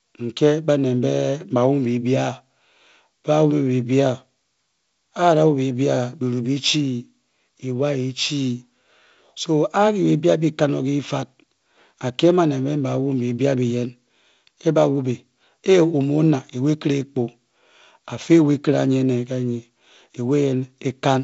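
Speech, with no technical faults to report.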